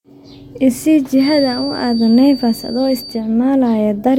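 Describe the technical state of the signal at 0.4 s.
At 0.4 s the signal is intact, with no dropout, distortion, clipping or other fault audible at that point.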